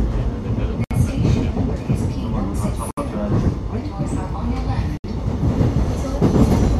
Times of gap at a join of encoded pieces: 0.84-0.91, 2.91-2.97, 4.97-5.04

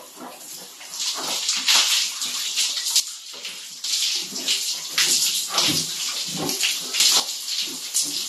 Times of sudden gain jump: 3.00-3.84, 7.00-7.20

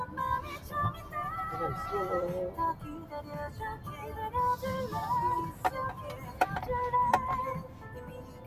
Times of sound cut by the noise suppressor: 0.57-1.14, 2.74-3.32, 5.52-5.67, 5.96-6.40, 7.62-8.46

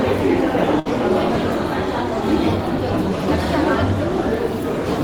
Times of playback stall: none

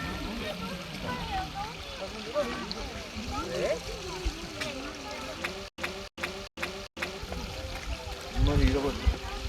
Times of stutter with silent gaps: 5.68-7.18

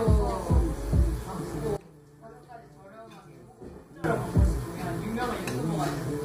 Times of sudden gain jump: 1.76-4.04

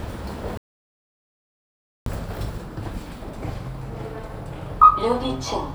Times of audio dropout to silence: 0.57-2.06

